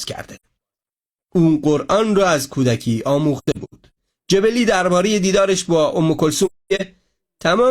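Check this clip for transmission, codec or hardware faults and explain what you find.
Three soft-edged dropouts interrupt the speech. The first comes at 0.35 to 0.45 s, a single gap of about 85 ms. The second, from 3.37 to 3.96 s, is a broken patch of several short holes spread over about 0.6 s, the longest near a tenth of a second. The third, from 6.45 to 6.81 s, is mostly one continuous silence of about 0.3 s. Each gap fades out and back in. This is AAC frame loss with muting. The decoder zeroed the spectrum of the missing frames, and the overlapping transform windows smooth the edges. The lengths point to losses of roughly two to seven frames of about 43 ms each.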